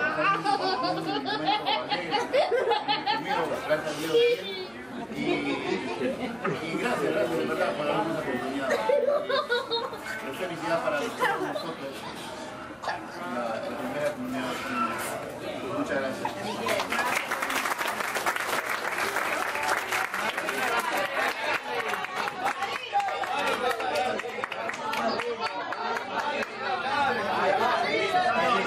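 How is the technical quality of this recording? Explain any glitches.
No glitches can be heard in this recording, so there are none to explain.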